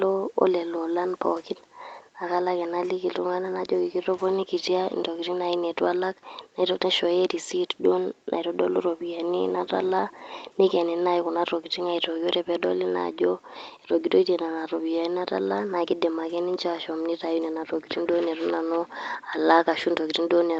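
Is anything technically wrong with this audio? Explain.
No, nothing is technically wrong with this speech recording. It has been through a call's microphone processing and codec, so nothing reaches above about 8 kHz, which fits a wideband call setting.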